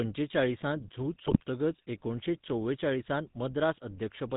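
The whole clip runs through the GSM full-rate codec, and you can plainly hear it. The speech is rebuilt from a vocal-tract model driven by sparse pulses, at what sounds like the 13 kbps rate, with nothing above 4 kHz. That gives it that buzzy, gravelly roughness.

From about 1.26 to 1.44 s, just before "एकुणशे चोवेचाळीसांत", GSM bit errors break in. Corrupted filter, pitch and gain values reach the decoder across what sounds like a short run of frames, so the spectrum warps and the level jumps, and the speech dissolves into squawks, pops and gargling.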